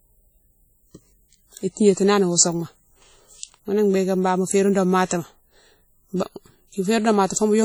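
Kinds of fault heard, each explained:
WMA compression: The speech carries a ringing, washy quality throughout, with a hiss that swells and fades along with the sound. Heavy damage of this kind likely comes from Windows Media Audio, whose long transform blocks smear quantisation noise over tens of milliseconds. The density of the artefacts fits a low rate of around 32 kbps. Content still reaches about 20.1 kHz, so the fault is noisy, breathing smear rather than the dull, muffled top end of a bandwidth cut.
pre-echo: From 7.26 to 7.30 s, a short hiss runs ahead of a sharp attack for about 38 ms, and the onset sounds softened. The attack falls late in a transform block, and the codec spreads noise sized for the loud part evenly across the whole block, including the quiet moment before it. Unlike reverb or a true echo, which trail after the sound, this smear arrives before the attack it belongs to.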